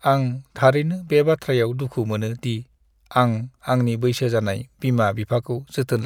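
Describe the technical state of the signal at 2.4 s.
At 2.4 s the speech signal is intact, with no audible fault.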